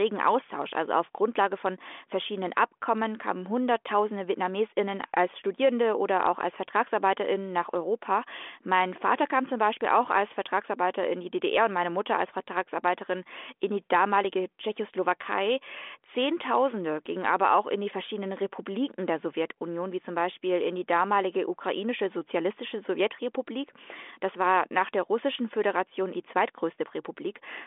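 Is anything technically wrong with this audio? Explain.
No, this speech is carried by G.726 ADPCM at 40 kbit/s, working as intended, with a telephone line band of about 250 Hz to 3.5 kHz and nothing above 3.8 kHz.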